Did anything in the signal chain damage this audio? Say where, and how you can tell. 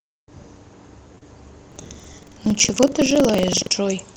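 Yes. Short concealed packet loss hits the network stage twice in overlapping spans, 1.15 to 1.24 s and 1.18 to 1.23 s, as the speech briefly smears and wobbles. Roughly 20 ms of packets arrived too late each time, so the receiver's concealment extended the preceding sound, repeating its pitch where voiced and using shaped noise where not, before crossfading back. The patched stretches run about 11 ms and 26 ms, short enough to blur or drop a consonant.

Buffer tearing, a driver or buffer fault, runs from 1.67 to 3.71 s as a steady robotic rattle near 21.5 Hz that rides only on the speech. That rate fits a 2048-sample ring buffer whose write and read pointers have drifted until they cross within every period. A small slice of each buffer, roughly a seventh, still holds audio from about a fifth of a second earlier, spliced in with hard edges on both sides. Each period's pair of clicks is what sounds as the buzz. 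The Opus call path's coding noise and 8 kHz top end sit beneath both faults.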